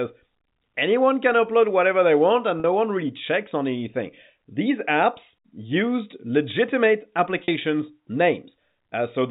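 At 2.60 s, between "whatever they want and" and "no one really checks", and at 7.44 s after "used legitimate", packet loss with pitch repetition bridges each 40 ms gap by looping the last pitch period, a brief buzzy hold. A spectrogram shows frozen, flat harmonics; the waveform shows repeating cycles that fade.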